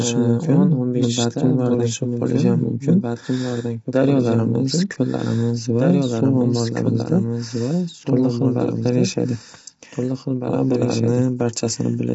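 Speech in which every phrase returns about two seconds later as a second, somewhat quieter copy, roughly 5 dB below the original, with the same full bandwidth and no reverb tail or room colouring, so the two layers talk over each other from about two seconds in until the end. This is a doubled audio track, likely from the signal being captured twice along paths of different delay. On a spectrogram the pattern of every syllable repeats two seconds to the right at slightly lower intensity, and the waveform shows each burst echoed at that fixed offset. The voice is also plainly rough and grainy, with a hiss-like fill between the harmonics and nothing above 7.8 kHz. That points to low-delay AAC compression, likely AAC-ELD at a low rate near 24 kbps, where very short frames cannot resolve the harmonics cleanly. A spectrogram would show smeared, noisy harmonic lines and a hard ceiling at 7.8 kHz.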